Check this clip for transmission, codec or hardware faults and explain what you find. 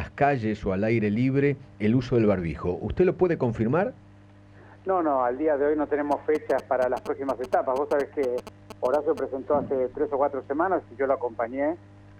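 There's one hardware fault here: GSM signalling bursts from about 6.12 to 9.19 s. A nearby 2G phone is exchanging short radio bursts with the network, and the audio circuit rectifies them into a galloping run of ticks and buzzes at 217 Hz, sitting roughly 10 dB under the wanted sound.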